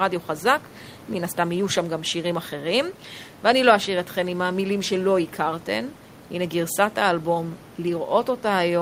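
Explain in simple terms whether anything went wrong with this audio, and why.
Nothing went wrong with this speech recording. At no point does the sound break off, jump or shift in a way that would point to a technical problem.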